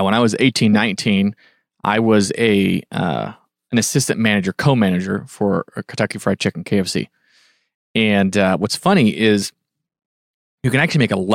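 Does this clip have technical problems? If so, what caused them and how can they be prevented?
No, there are no technical faults.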